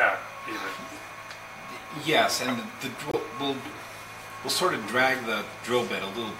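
At 3.10 s, corrupted compressed data causes a corrupt frame muted fault. Bit errors damaged the encoded stream, the decoder rejected the affected frames, and the player filled the gap with silence instead of concealing it. The dropout lasts about 54 ms, to 3.15 s, which fits two consecutive codec frames being thrown away. The sound cuts out abruptly into a short hole of silence, then resumes on schedule with no shift in timing afterward.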